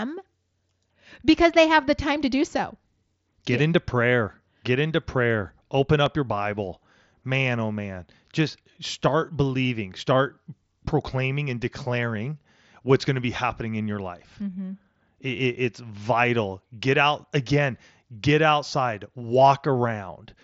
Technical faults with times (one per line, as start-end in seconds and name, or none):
6.06 block of digital silence